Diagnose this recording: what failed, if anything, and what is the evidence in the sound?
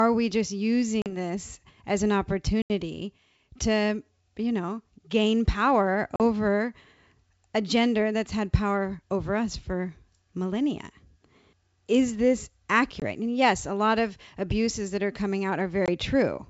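Packet loss on an ADPCM call, a network fault: hard-edged silent gaps of 20 to 80 ms at 1.02 s (after "we just"), 2.62 s (after "this as an"), 6.16 s, 13.00 s and 15.86 s (after "abuses that are coming"), consistent with lost 20 ms packets. Each hole knocks the G.722 decoder's adaptive predictor and step size out of step with the sender's, so the speech resumes slightly distorted before settling.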